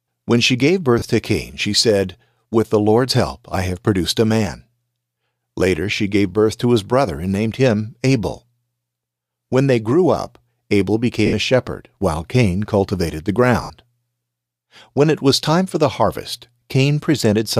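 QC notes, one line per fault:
0.99–1.02 s, 11.26–11.33 s, 13.63–13.70 s: lost LE Audio frames. The first gap lasts 30 ms, just after "she gave". The second lasts 70 ms, right before "a shepherd while". The third lasts 70 ms, just after "cultivated the". Each time the decoder repeats the last spectrum with scrambled signs. The speech briefly turns into a noisy smear. In the 70 ms gaps that smear fades before the audio resumes. The gap lengths fit 10 ms frames, likely from an LC3 link.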